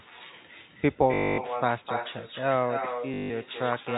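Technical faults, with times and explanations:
Throughout: echo with no canceller. Every stretch of speech is followed, roughly 300 ms later, by a copy about 6 dB quieter and thinner. That is the far end's loudspeaker feeding its microphone and nothing cancelling it. Unlike room reverberation, which smears into a continuous tail, this is a distinct delayed repeat.
1.14 to 1.38 s and 3.14 to 3.30 s: packet loss with last packet repeated. For 240 ms and then 160 ms, the receiver kept replaying the last audio it had instead of leaving a gap. The replayed segments seldom line up with the pitch cycle, and the run buzzes at 50 Hz, which fits 20 ms packets. That robotic stutter, not silence, is what separates this from a plain dropout. The narrow telephone band of the G.711 line can still be heard around both events.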